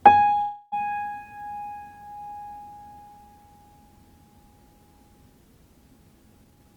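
A call audio freeze runs from 0.41 to 0.74 s: the last sound stretches into a fading buzz or hiss for about 0.3 s, likely from delayed packets, then resumes without loss. A jitter buffer speed-up from 6.44 to 6.74 s plays the audio at 160% speed with unchanged pitch, trimming about a fifth of a second to reduce backlog.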